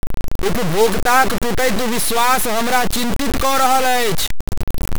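Speech carries grainy distortion for its full length, with error nearly as loud as the signal, likely from low bit depth without dither, roughly 3-bit truncation. Unlike steady hiss, the grit moves with the sound and quiet stretches sputter or drop out.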